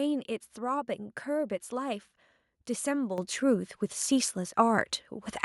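Microphone volume stepped up at 3.18 s: the call software judged the microphone too quiet and raised the device's input gain in a single step of about 8 dB, so the speech and the background noise jump louder together, abruptly, with no gradual ramp.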